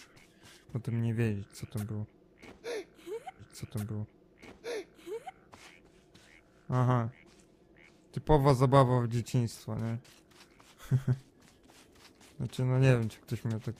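At 3.39 s the audio jumps back with a brief blip and replays a passage, so the same two seconds of sound are heard again before the programme moves on at 5.39 s. This is a stream segment repeated: the player fetched or queued one segment twice and played both copies in sequence. That adds 2 seconds to the running time, and the blip marks the seam where the duplicate begins.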